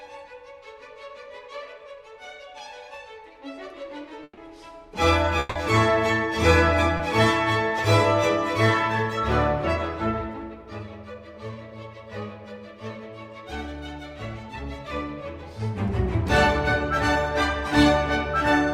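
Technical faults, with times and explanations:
4.23–4.39 s, burst of packet loss: About 140 ms of audio never arrived in time, so the receiver kept extending the last sound and lowered its level as the gap went on, leaving a fading buzz or hiss followed by about 40 ms of silence before the sound resumes further along. On a spectrogram, the frequency pattern just before 4.23 s repeats without change and darkens, then there is a brief blank band. The waveform tapers to a flat line.
5.39–5.57 s, long network dropout: A stretch of about 160 ms is missing, and the receiver filled all of it with a continuation of the preceding sound, with no silent portion left over. The result is a held, artificial-sounding buzz or hiss that then jumps into audio from further on. The likely cause is a network interruption. A spectrogram shows smeared, unchanging harmonics or noise across the gap. The waveform shows a repetitive, decaying envelope instead of the natural variation around it.
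6.97–7.01 s, short concealed packet loss: Only about 20 ms went missing. The receiver patched it by briefly extending the last sound and blending back into the real signal, which is heard as a quick smear or wobble. On a spectrogram, there is a narrow vertical strip where the detail blurs or repeats. The waveform shows a short segment that continues the sound just before it, then blends back into the real audio.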